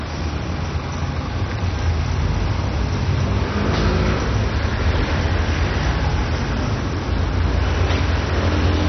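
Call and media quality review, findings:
Dull, band-limited sound for the whole clip, nothing above about 6.1 kHz. Gurgling, granular texture as upper bands drop in and out and the rest are coarsely quantised. Likely MP2 compression at a starved rate, consistent with roughly 32 kbps.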